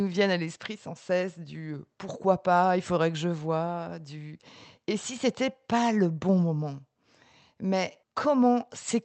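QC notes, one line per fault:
Nothing to flag on this speech clip; it came through an ordinary Opus call path at 32 kbps, with the top end stopping around 8 kHz as that setup does.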